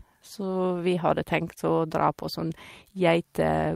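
No technical faults can be heard anywhere in this speech recording. Nothing in the audio needs a timestamp or further comment.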